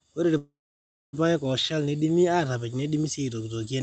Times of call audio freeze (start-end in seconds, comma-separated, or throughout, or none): 0.37-1.15